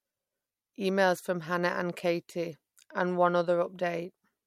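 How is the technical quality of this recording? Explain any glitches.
One brief glitch occurs in the speech. At 2.52 s, a corrupt frame was decoded: flipped bits made the decoder misplace energy across a few frames, giving a faint glitch near about -50 dBFS, a thin vertical smear on a spectrogram.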